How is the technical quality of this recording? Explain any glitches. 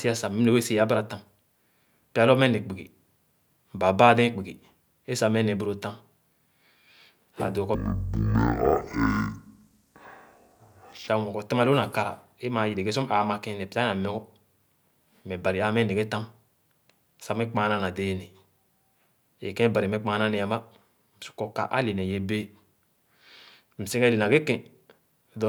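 There's one clear glitch. From 7.75 to 11.08 s it's stereo read as mono: interleaved left-right samples get played as one channel, so speech drops to half speed, an octave low.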